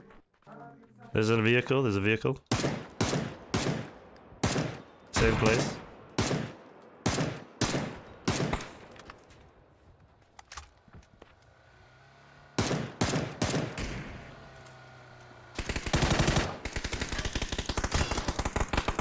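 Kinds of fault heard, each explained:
Nothing here stands out as a fault; the audio just runs along without any glitch or problem catching the ear.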